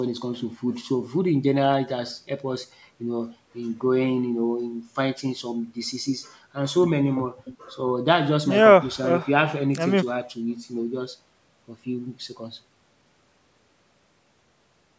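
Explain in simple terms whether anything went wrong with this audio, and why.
Nothing went wrong here: the speech has passed through a call's microphone processing, which trims the deepest bass and leaves nothing above 8 kHz, and that is ordinary for a call.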